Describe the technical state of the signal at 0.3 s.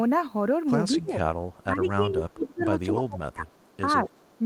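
At 0.3 s the speech signal is intact, with no audible fault at that moment.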